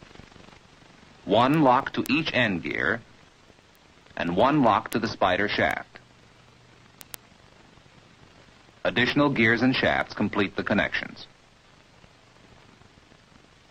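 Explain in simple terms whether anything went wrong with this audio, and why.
Word clock ticks run from 0.10 s to 13.66 s: about a hundred sharp ticks, one roughly every 0.15 s. Two digital devices ran on separate clocks that drifted apart by about 200 parts per million, so one sample slipped at each crossing.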